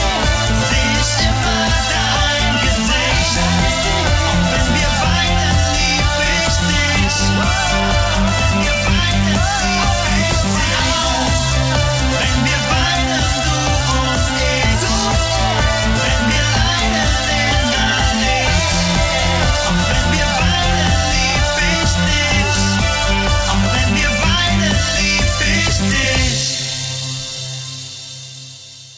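Nothing stood out on listening.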